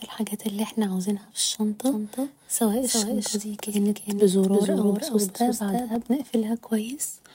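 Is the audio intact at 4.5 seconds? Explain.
No. From 1.86 to 5.96 s the speech has a doubled audio track: a second full-band copy trails by roughly 300 ms, about 5 dB quieter, likely from a second, slower capture path. Unlike an echo, it has no decay or room colour, and it starts and stops abruptly.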